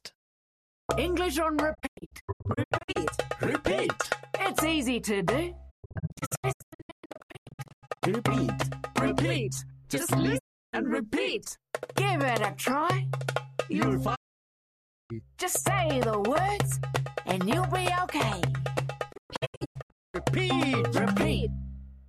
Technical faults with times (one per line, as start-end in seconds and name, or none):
1.73-2.97 digital broadcast dropout
5.69-8.04 digital broadcast dropout
10.37-10.75 digital broadcast dropout
14.14-15.12 digital broadcast dropout
19.11-20.16 digital broadcast dropout